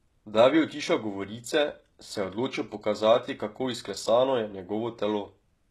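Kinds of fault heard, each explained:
HE-AAC compression: The speech has plainly audible codec damage throughout, with treble that sounds synthetic, so s sounds come out gritty, metallic or lispy, and nothing is present above about 12.3 kHz. This is likely HE-AAC at a low bitrate around 16 kbps, which codes only the lower spectrum and fills the treble by copying lower bands upward under a coarse envelope, so the rebuilt harmonics do not line up with the real ones.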